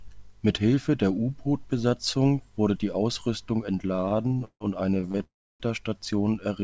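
From 3.88 to 5.22 s the speech drags and hiccups through 19 brief stalls, the longest 157 ms, with about a third of that stretch filled in. These are repeated stalls (stutter): packets kept arriving late, the jitter buffer repeatedly ran dry, and the receiver stretched the last sound, losing nothing.

At 5.24 s a short buzz fades into about 300 ms of silence before the speech resumes at 5.62 s, 359 ms later than it should. This call audio freeze was likely caused by packets being held up until the jitter buffer emptied. Nothing is missing, though the G.722 path already removes everything above 8 kHz.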